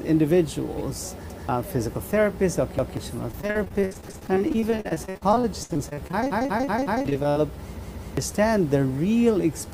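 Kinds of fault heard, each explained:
repeated buffer: A chunk of about 186 ms plays again right after itself with a hard seam at each join, giving a lurching stutter rather than a click. This happens at 1.30, 2.79, 4.09, 6.32 (four extra repeats, running to 7.06) and 7.80 s (two extra, to 8.17). Fresh audio failed to reach the output in time, so the device replayed its last block, which fits an 8192-sample buffer, and roughly 0.2 to 0.7 s of real audio is lost each time.
repeated packet loss (robotic sound): From 3.31 to 7.38 s the sound turns choppy, broken by 53 short holes, the longest 62 ms, with the repeated-buffer stutters at 4.09 and 6.32 s landing inside this stretch. Packets kept going missing or arriving late, and each gap was filled by extending the preceding sound, so about 32 percent of the span is synthetic patching while some 1.36 s of the original is gone.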